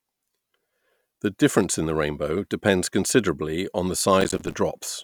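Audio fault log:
4.21–4.54 s, processor overload crackle: just after "depends considerably upon the", the speech tears into gritty crackle as the processor misses a few dozen deadlines in a row, each leaving a hard-edged silent gap that fits buffers of around 5 ms.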